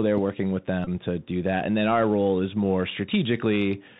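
From start to finish the speech carries the sound of the Bluetooth CVSD headset codec. CVSD encodes each sample as a single up-or-down bit and adapts its step size, which fits a 64 kbit/s headset link. The damage is plainly audible. The band stops at 4 kHz, so the speech sounds narrow and telephone-like. A granular hiss sits underneath, s sounds turn scratchy, and loud high-frequency parts distort where the step size cannot keep up with the waveform.

From 0.84 to 0.89 s there is a Bluetooth headset packet repeat. Roughly 22.5 ms of audio went missing between headset and phone, which points to about six lost packets. Instead of the missing data, the decoder replayed the previous packet's bits over and over. Because the same 3.75 ms block repeats, a short, steady buzz near 267 Hz replaces the speech until good packets arrive again.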